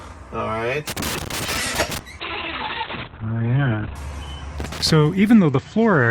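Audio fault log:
0.87 to 1.99 s and 4.59 to 4.91 s, loose connector crackle: a worn or dirty contact in the signal path is making and breaking as it shifts, chopping the audio on and off at random and letting any DC on the line through as small pops. The result is an irregular scratchy crackle, first for just over a second, then a shorter burst of about a third of a second.
2.21 to 4.01 s, call bitrate drop: the call's bandwidth estimate fell and the encoder was pushed onto far fewer bits, which fits a fall from around 32 kbps to 7 kbps, holding at the lowest rate for 1.74 s. The coarser coding makes the sound rough and watery, and the audio bandwidth shrinks from 20 kHz to 4 kHz, so the top end disappears and everything turns muffled until the rate recovers.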